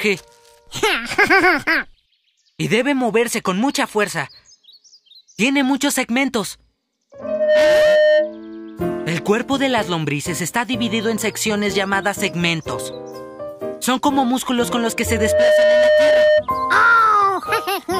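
A microphone is hearing the loudspeaker it drives, and at 610 Hz the loop gain tips past one, producing loudspeaker feedback squeal twice: from 7.19 to 8.41 s and from 14.98 to 16.45 s. Each time, a single 610 Hz tone swells out of the audio over roughly 0.4 to 0.5 s, rising to a few dB above the surrounding sound as a steady squeal. It then stops.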